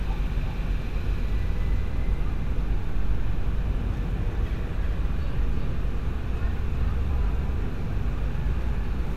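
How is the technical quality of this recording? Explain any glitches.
The recording has one clear fault. Throughout the clip there is a doubled audio track, likely from a second, slower capture path or an edit that leaves two copies out of step. The result is a dry, full-band copy trailing roughly 400 ms behind and about 5 dB quieter, so every sound repeats as a distinct echo.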